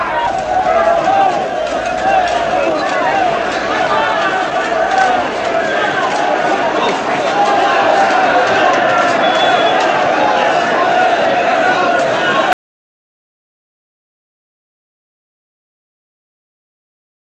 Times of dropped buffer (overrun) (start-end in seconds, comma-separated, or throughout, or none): none